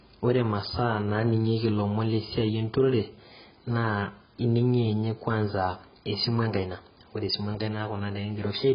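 Throughout, the speech sounds dull and smeared, with nothing above 5 kHz. The likely cause is heavy AAC compression, which fits a bitrate around 12 kbps.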